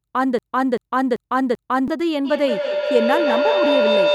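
A speech clip with two separate faults. From 0.39 s to 1.88 s there is a broken-record loop. A fragment about 388 ms long plays back to back, four times in a row, with no change between repeats. The speech that belonged in that stretch never arrives. The likely cause is a stalled player, encoder or stream that kept resending the last piece it held. From 2.25 s to the end of the clip, a feedback howl takes over. Sound from a loudspeaker reaches a microphone on the same call and goes round the loop again. Each trip adds level, so the tone grows instead of dying away. It narrows to a pitch around 500 Hz and pulses roughly every 150 ms, matching the loop's delay. At its peak it is about 2 dB louder than the speech. It never stops before the clip ends.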